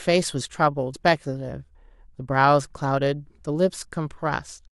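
A short speech recording with one instance of compressed frames skipped at 0.93 s. The audio jumps forward by roughly a tenth of a second, consistent with a few missing or rejected frames of about 23.2 ms each.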